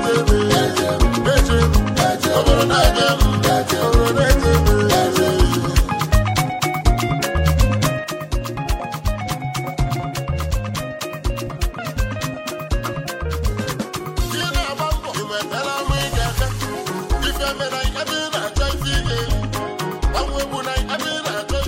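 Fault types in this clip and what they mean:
One channel drops out: at 8.04 s the sound falls abruptly by about 6 dB and stays lower to the end. The likely cause is one stereo side going silent, leaving the mono sum with only the remaining channel's half of shared material.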